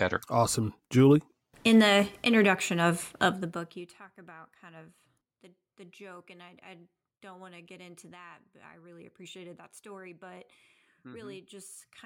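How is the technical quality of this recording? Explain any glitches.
There's one glitch worth flagging, a burst of zipper noise. From 3.31 to 3.92 s, just after "the introduction of" and before "about kind of the", the level drops about 25 dB in unsmoothed 1 dB jumps, around forty a second. Each jump clicks, so a fast zipping ticks over the speech as it fades.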